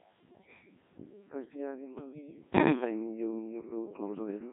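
Right through the speech you can hear the Codec 2 vocoder at work, probably around 1.6 kbit/s. It keeps only pitch, energy and envelope and rebuilds everything from sine waves, so it comes out buzzy and robotic, squeezed into roughly 200 Hz to 3.5 kHz.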